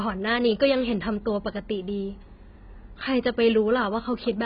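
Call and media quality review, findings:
Dull, band-limited speech throughout, nothing above 5 kHz, with smeared, warbling sibilants and fizzy sustained sounds. Likely AAC compression (AAC-LC) at a very low rate, consistent with about 16 kbps: lowered cut-off, coarsely quantised spectrum, holes between bands.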